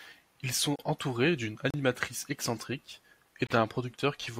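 At 0.76 s, 1.70 s and 3.47 s the speech drops into a block of digital silence lasting 32, 34 and 35 ms. Samples were zeroed, likely because the output buffer wasn't filled in time. The sound cuts out and back with no fade, so each event is heard as a short hole. On the waveform it is a nearly flat line. On a spectrogram it is an empty vertical gap.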